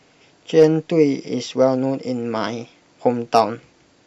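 Hard clipping appears twice in this speech, first from 0.59 to 0.64 s and again from 3.35 to 3.40 s. Each time the level rises about 2 dB beyond what the signal chain can carry, so the tops of the waveform are sliced off flat. Those squared-off peaks throw extra harmonics high into the spectrum, and with an overload this small the result is a brief crackle riding on the loudest moments rather than a sustained fuzz.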